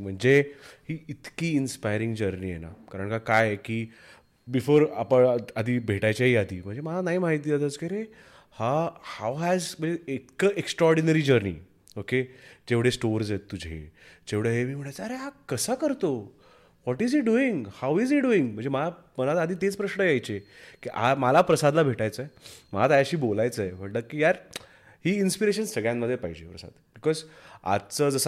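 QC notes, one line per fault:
No technical faults were found in the signal.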